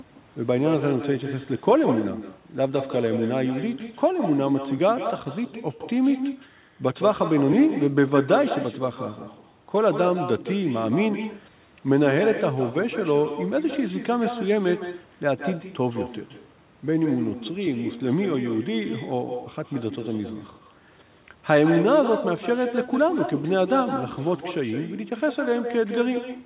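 Throughout the speech, the far end is playing the call over a loudspeaker and its microphone is feeding that sound straight back, with no echo canceller removing it. Each phrase returns roughly 150 ms later, about 9 dB below the original, so every syllable trails a fainter, hollow copy. The returning copy is also narrowband, with nothing above 4 kHz, which fits a G.711 mu-law call path.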